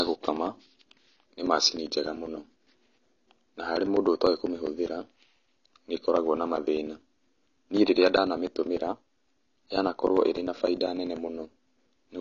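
It's a speech recording, and the whole thing sounds dull and smeared, with nothing above 7 kHz and a fizzy, warbly edge on sibilants. That's likely AAC compression, AAC-LC at a low rate, which fits something around 24 kbps. On top of that you get periodic USB or driver dropouts from about 0.07 s to 12.07 s. A few milliseconds of audio drop to silence every 0.1 s, around a hundred times, so there's a steady ticking under the speech that only shows up while there's signal.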